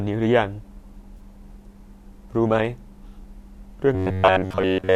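At 1.17 s, about 20 ms of coded audio, consistent with two AAC frames, never reached the decoder, and AAC frame loss with concealment took over until 1.20 s. The decoder rebuilt the gap from the last good spectrum rather than from real signal, so the speech loses its clean structure for that instant. It comes through as a brief smeared, noisy and phasey blip in the voice, too short to fade toward silence before proper decoding resumes.

From 3.95 s to the end at about 4.95 s, new audio likely arrived too seldom, and playback kept repeating a short chunk of roughly 10.7 ms in place of fresh samples, skipping most of the real material. That loop stamps a fixed pitch of 93.8 Hz onto the speech, giving robotic sound from repeated short buffers: a rigid, metallic buzz that still loosely traces the rhythm of the speech.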